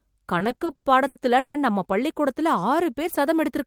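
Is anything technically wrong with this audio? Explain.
Yes. Repeated stalls (stutter), 0.39 to 1.57 s: late packets kept emptying the jitter buffer, so held sound fills ten gaps of up to 150 ms and the speech drags.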